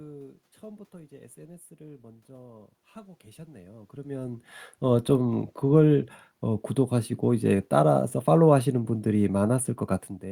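No technical faults are audible.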